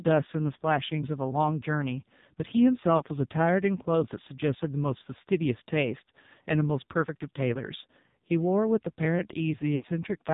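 Thin, buzzy and synthetic from start to finish, the speech has nothing above 4 kHz. That is the AMR narrowband mobile codec at heavy damage. The codec samples at 8 kHz and rebuilds the voice from a vocal-tract model fed by sparse pulses, and the coarseness heard here fits a low mode around 5.9 kbps.

From 2.98 to 3.02 s there is a brief dip and warble, then the voice returns rough for a moment. At 9.76 to 9.85 s the sound stretches out and fades toward silence before recovering weakly. Both are lost AMR speech frames. When a frame fails its check, the decoder repeats the last good pitch and vocal-tract settings at falling gain. The first gap fits one missing 20 ms frame, and the second fits a run of about three.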